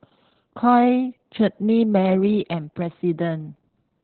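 From start to finish the speech sounds muffled, hoarse and faintly robotic, with nothing above 4.2 kHz. This is Opus voice compression in SILK narrowband mode, which coarsely codes the excitation. The heavy damage fits a bitrate of around 8 kbps.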